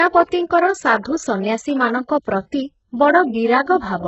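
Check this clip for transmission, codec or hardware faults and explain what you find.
Two kinds of fault are audible in this speech clip: heavy codec damage across the whole recording, and two brief pre-echoes.

HE-AAC compression, throughout: The high band sounds synthetic, and nothing reaches above 8 kHz. The likely cause is HE-AAC coding at a very low rate, with damage this heavy fitting something around 8 kbps. Only the lower spectrum is truly coded. The treble is rebuilt by copying lower bands upward under a coarse envelope, so its harmonics don't line up with the real ones. Sibilants come out gritty, metallic and lispy.

Pre-echo, at 1.01 to 1.05 s and at 2.08 s: A short hiss precedes each of two sharp attacks, lasting about 44 ms the first time and about 11 ms the second. The codec spreads its quantisation noise across a whole transform block. Each attack falls late in its block, so noise sized for the loud onset also fills the quiet moment just before it. 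Both attacks lose their crispness and sound softened and smeared.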